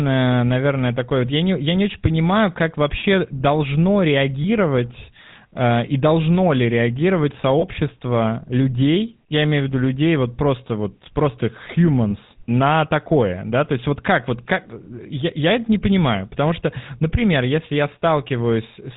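GSM full-rate codec, throughout: the vocal tract is modelled and driven by sparse regular pulses, nothing above 4 kHz survives, and the speech sounds plainly buzzy and gravelly, consistent with 13 kbps full rate.

Lost GSM frames at 4.42–4.46 s, 7.60–7.65 s and 12.10–12.13 s: each gap, about 20 ms and fitting a single missing frame, is filled by repeating the last good frame, leaving a brief rough, metallic ring.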